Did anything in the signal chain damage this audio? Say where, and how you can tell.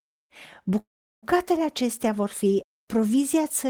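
Yes, there's a call audio freeze at the network stage, 0.79 to 1.25 s. The last sound trails off, sits silent for about 0.38 s, then resumes right where it stopped, with nothing lost, just 0.43 s later. Likely stalled packets drained the jitter buffer.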